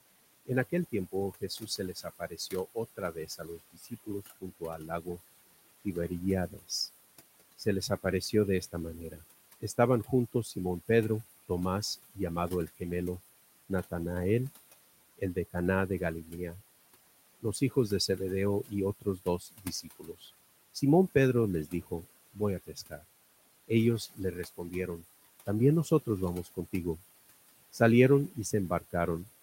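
Throughout the speech, the room noise, sitting about 15 dB below the voice, sinks and swells. These are noise suppressor artifacts, with the background pulled down by about 19 dB between phrases. Soft consonants and word endings sound swallowed in four spans: 0.46 to 13.92 s (about two seconds affected in all, up to about 20 dB down), 15.18 to 16.34 s (a fifth of a second, about 12 dB), 17.41 to 26.72 s (about one and a half seconds, about 21 dB), and 27.72 s to the end (about 19 dB). This is speech cut by the noise suppressor, which mistook those quiet parts for noise.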